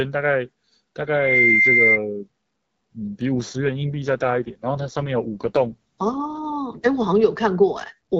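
From 3.35 to 6.58 s an AMR rate drop roughens the speech. The audible band stays put and nothing drops out, unlike packet loss or a narrowband fallback. The raspy, synthetic texture fits AMR-WB stepping from 12.65 to 6.6 kbit/s.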